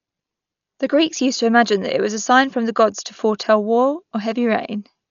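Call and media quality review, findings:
Speech dull, nothing above about 6.9 kHz, rough fluttering noise around voiced tones, throughout. Likely Dolby Digital compression at low bitrate, which fits about 48 kbps: band narrowed, unfunded lines dither-filled.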